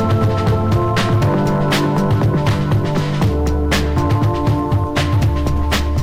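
From start to finish the audio suffers hard clipping. The signal is pushed about 10 dB past what the stage can pass, so roughly 15 percent of the samples are sliced flat at the ceiling. Those squared-off peaks spray harmonics high into the spectrum, heard as a harsh, buzzy fuzz on every loud moment rather than occasional crackle. Unlike soft saturation, which rounds peaks and sounds warm, the edges here are abrupt and gritty.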